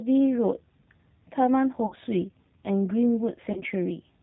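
Throughout, the speech passes through the G.729 codec at 8 kbit/s, which rebuilds each 10 ms frame from a vocal tract filter, a pitch predictor and a handful of pulses instead of the original waveform. Nothing above 4 kHz survives, so the sound is dull and boxy. The damage is plainly audible, leaving the speech slightly rough and synthetic.

From 1.86 to 1.96 s, VoIP packet loss concealed by the speech codec sets in. About 60 ms of audio went missing, which fits three 20 ms packets. With no new data, the decoder keeps repeating its last pitch and filter at falling gain. That smears the sound into a fading, stretched sound, and it stays thin briefly after packets return. The same happens from 3.52 to 3.62 s, where the gap is about 40 ms, which points to two packets. The stretched, decaying sound here is shorter.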